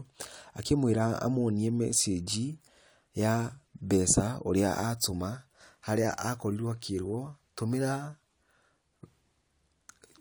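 No technical faults can be heard anywhere in the recording.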